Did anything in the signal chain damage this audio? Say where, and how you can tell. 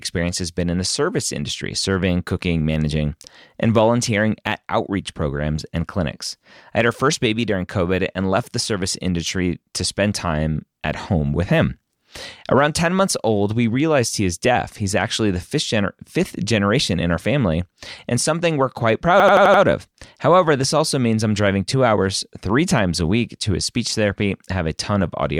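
Yes. Right after "and something we're quite", from 19.2 to 19.63 s, the driver or buffer stage shows a system hang loop. The same 85 ms piece of speech repeats five times at a steady 11.7 Hz, giving a fast mechanical stutter. This fits a 4096-sample ring buffer replayed while the system froze. The repeats are identical, not varied or fading concealment frames as in network loss, and speech resumes with almost nothing skipped.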